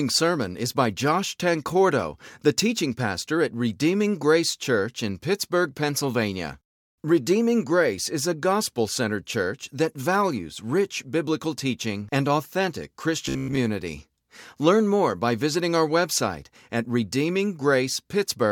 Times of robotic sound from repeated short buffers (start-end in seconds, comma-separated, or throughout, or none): 13.26-13.57